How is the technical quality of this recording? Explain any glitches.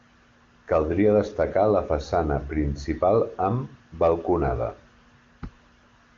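No audible glitches or faults.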